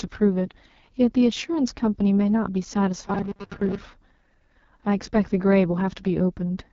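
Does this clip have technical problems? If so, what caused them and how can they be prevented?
Yes. The whole clip carries heavy AMR wideband (HD Voice) codec damage, with nothing above 7.4 kHz. The speech sounds rough and raspy throughout, which points to the codec's lowest rate, around 6.6 kbit/s. The band above 6.4 kHz is only shaped noise. Running the call at 12.65 kbit/s or higher prevents this.

From 3.08 to 3.82 s the speech turns into robotic sound from repeated short buffers. It becomes a rigid metallic buzz at 200 Hz. The likely cause is late audio. The software loops the last 5 ms chunk, and roughly half the real audio is skipped. A larger jitter buffer or steadier delivery prevents it.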